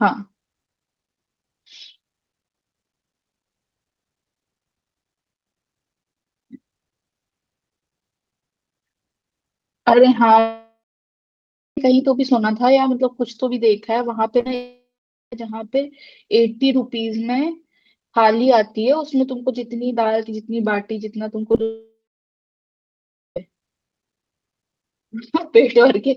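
From 10.39 to 11.78 s there is a long network dropout. The sound carries on as a fading buzz, then about a second of near silence. A run of lost packets is the likely cause. The speech resumes with about 1.4 s missing.

Short concealed packet loss follows at 14.41 to 14.43 s, 14.43 to 14.46 s, and 14.48 s. Each hole of 10 to 20 ms is patched by extending the previous sound. These come across as brief smears or wobbles.

A second long network dropout runs from 14.55 to 15.33 s. About half a second of it is near silence after a short fading tail. Packets that never arrived are likely behind it. Roughly 0.77 s of speech is gone.

Between 21.49 and 21.60 s there is repeated packet loss, with a robotic sound. Four small gaps, the longest 13 ms, are each filled by continuing the last sound. That patching covers about 38% of the span, so the audio turns choppy.

From 21.63 to 23.37 s a third long network dropout follows. 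A brief buzzing tail gives way to about 1.4 s of silence. The likely cause is a sustained break in delivery. About 1.7 s of speech never plays.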